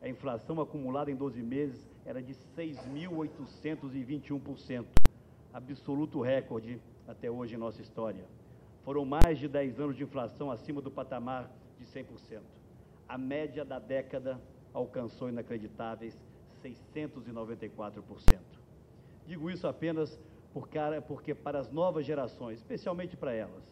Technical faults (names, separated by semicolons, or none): invalid numbers at full scale